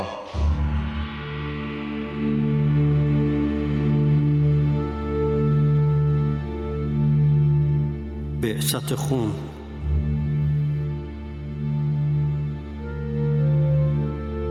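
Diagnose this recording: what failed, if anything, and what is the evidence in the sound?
Gain pumping throughout: the gain swells in gaps and ducks around 5 dB under loud sounds, likely excessive input gain caught by a fast call-processing limiter.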